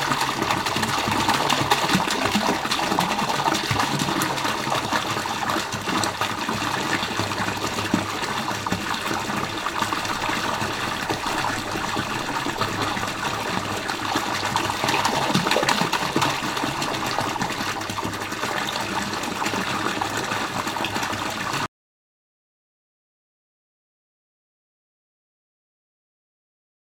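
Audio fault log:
21.66 s to end: audio dropout to silence. The sound stops abruptly mid-flow at 21.66 s and never returns. The remaining five seconds hold silence, with no room tone or hiss beneath it. That flatness marks lost input rather than a quiet passage. The likely cause is a disconnected device, a failed link or a stray mute while the recorder kept writing silence. Whatever followed the cut is gone.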